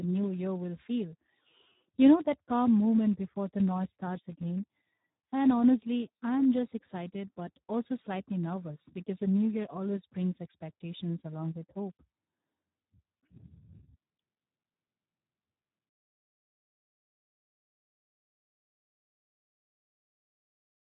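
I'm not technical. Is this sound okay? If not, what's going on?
No. The speech sounds hoarse, noisy and somewhat robotic throughout, with nothing above about 3.8 kHz. That's heavy Speex codec damage from very aggressive compression.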